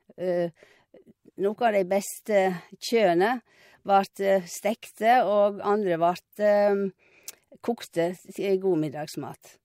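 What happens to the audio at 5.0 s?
Nothing goes wrong at 5.0 s; the audio there is intact, with no dropout, click, distortion or other fault.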